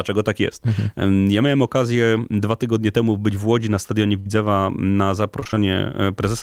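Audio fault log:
4.19–4.28 s: burst of packet loss. About 62 ms of sound is bridged by extending and fading the last received audio, and the sound then resumes with roughly 60 ms of the original missing, so it briefly smears and then jumps forward.
5.40–5.58 s: repeated packet loss (robotic sound). Five short dropouts, none longer than 20 ms, follow in quick succession. Each is patched by repeating the preceding sound, so nearly half of this stretch is synthetic fill, about 100 ms is lost, and the result sounds choppy.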